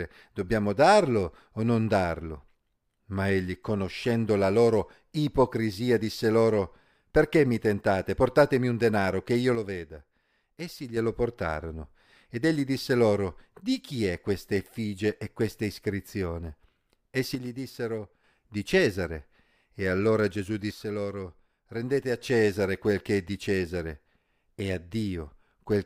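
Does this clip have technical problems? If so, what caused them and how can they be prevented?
Yes. The speech falls abruptly by about 6 dB at 9.55–10.97 s (after "un denaro che io", back before "portarono ed egli disse"), 17.35–18.24 s and 20.71–22.21 s. The waveform shows sudden step-down plateaus there. The likely cause is one channel dropping out before the mono sum. Check stereo connections and monitor both channels while recording.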